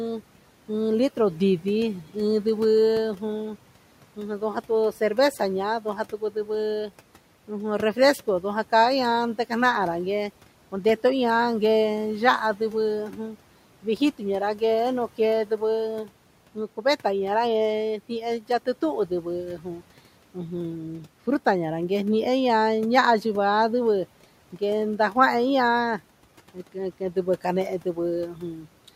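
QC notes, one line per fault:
4.16–6.91 s, 12.57–14.62 s, 15.18–17.05 s, 17.98–20.36 s and 26.54–28.89 s: speech cut by the noise suppressor. The suppressor mistook parts of the speech for the room noise sitting about 23 dB below it and turned them down by about 10 to 12 dB. Short stretches of a few tenths of a second in each span sound swallowed and faint.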